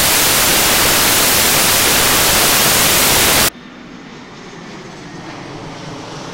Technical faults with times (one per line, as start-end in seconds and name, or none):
0.00-3.48 samples built from the wrong bytes